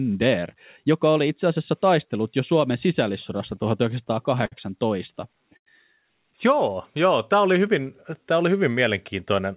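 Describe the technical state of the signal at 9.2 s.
At 9.2 s a jitter buffer speed-up runs from 9.14 to 9.54 s, after "hyvin tämä oli hyvin". About 70 ms of pitch periods are cut out, so the speech plays about 113% fast at unchanged pitch and sounds hurried.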